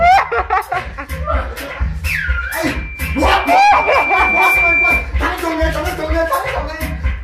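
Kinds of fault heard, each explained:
Loudspeaker feedback squeal: a microphone re-amplifying the loudspeaker it feeds until one frequency runs away. Here a lone 2.4 kHz tone swells over about two seconds to about 5 dB above the sound. A steady interference whistle would not grow like this.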